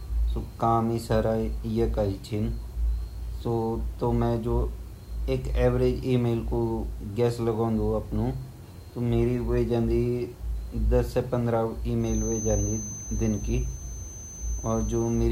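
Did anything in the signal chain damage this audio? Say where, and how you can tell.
Yes. A feedback whistle runs from 11.97 s to the end at 15.32 s. It is a thin 6.2 kHz tone about 15 dB below the speech, swelling and fading slowly, and shows as one unbroken horizontal spectrogram line. The likely cause is loudspeaker sound looping into the microphone, held just short of runaway.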